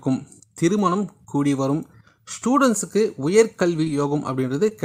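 Around 3.85 to 3.89 s there's a short concealed packet loss: about 20 ms of audio didn't reach the decoder in time, so the receiver stretched what it had just played across the gap and crossfaded back, adding around 20 ms. You hear a quick smear. It happens again at 4.69 to 4.73 s, where another 20 ms went missing and the patch-over leaves a brief wobble before the real signal returns.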